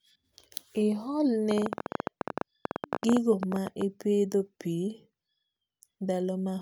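From 1.51 s to 3.82 s a train of clicks runs over the speech: about thirty sharp ticks at an uneven pace, averaging 13.9 per second and peaking at about 15 dB above the speech, audible in the pauses as well. The cause is likely interference from nearby equipment or a faulty connection or power supply. Unlike crackle, whose pops vary in size and shape, these clicks are nearly identical. Unlike a buzz, they are too sparse and irregular to form a tone.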